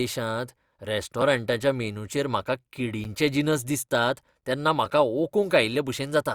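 At 3.04 s, between "मेनूचेर म्हाका" and "जिनस दिसतात तेन्ना", a block of digital silence about 9 ms long cuts the speech out with no fade, heard as a tick. The waveform shows a flat gap; the spectrogram shows a blank slot.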